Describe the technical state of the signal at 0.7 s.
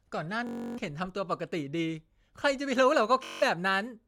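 At 0.7 s you're in the middle of a Bluetooth stutter running from 0.47 to 0.78 s. Packets went missing, so the receiver kept looping its last short slice of speech, giving a buzzy, machine-gun repeat. Then it jumps ahead, roughly 300 ms lost.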